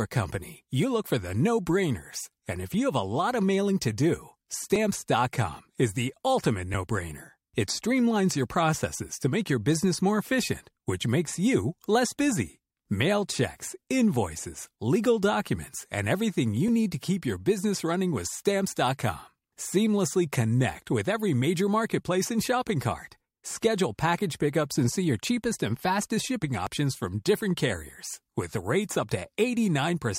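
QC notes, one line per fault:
26.67 s, overlap between stream segments: after "cheapest and fastest shipping", about 8 ms is cut at a segment join, so the waveform jumps, heard as a tiny skip.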